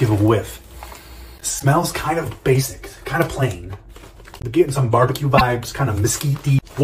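Damaged data in a compressed stream breaks up the audio twice, at 1.56 to 1.63 s and again at 5.34 to 5.41 s, each a short blip or squawk of about 70 ms. At both points, bytes inside the encoded stream have been corrupted, so the decoder misreads the affected frames, loses its lock on the frame structure, and has to hunt for the next valid header before clean playback resumes.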